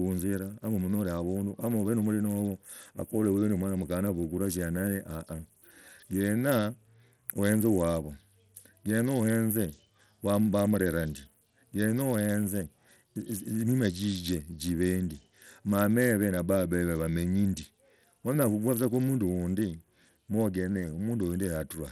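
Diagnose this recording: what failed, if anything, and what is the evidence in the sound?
Codec stage, start to finish: the speech has a plainly gritty, coarse edge, the top end sounds thin, and nothing gets through above 18.3 kHz. That's likely Bluetooth SBC compression with a tight bit budget, which fits an 80 kbps stream. The upper sub-bands get starved of bits, and everything else is quantised roughly.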